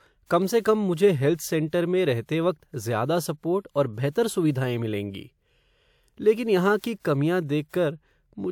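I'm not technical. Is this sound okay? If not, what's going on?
No. The compression smeared its noise ahead of sharp sounds, causing pre-echo: a brief hiss about 50 ms long before attacks at 4.11 s after "सपोर्ट और", 6.99 s after "लेकिन यहाँ की", and 7.69 s after "लेकिन यहाँ की कमियाँ".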